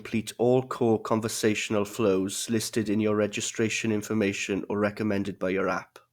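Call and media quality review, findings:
No findings in this call and media quality review.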